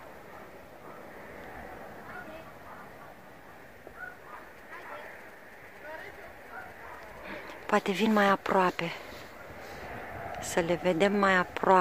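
A galloping dit-dit-dit pattern of short buzzes breaks in from 4.58 s to 7.19 s, sitting roughly 25 dB below the main sound. These are GSM signalling bursts. A nearby 2G phone was sending brief groups of radio bursts while exchanging signalling with its network, and some part of the audio circuit rectified that radio energy. The result was audible interference whose buzz repeats at about 217 Hz, the GSM frame rate.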